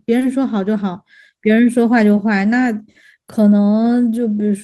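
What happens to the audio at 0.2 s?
At about 0.19 to 0.24 s there is a short stall from a late packet. A packet arrived after its playout time, the jitter buffer ran dry, and the receiver stretched the last sound by about 20 ms until the data came in, then resumed from the same point, so nothing is lost but everything afterwards lands 20 ms later. It sounds like a brief held smear with a slight buzz or dip. On a spectrogram the harmonics run flat and unchanging through that stretch; the waveform shows a repeated, periodic-looking segment.

That moment also falls within clock drift between sender and receiver, which runs through the whole clip. The sender's clock runs around one and a half percent slow, so the buffer keeps draining and the receiver must pad or stretch small pieces at uneven intervals. This late packet's stall sits on top of that steady drain. It is heard as recurring tiny timing hiccups. 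Spectrograms show scattered brief stretched or doubled slivers, and waveforms show small repeated cycles and occasional seams.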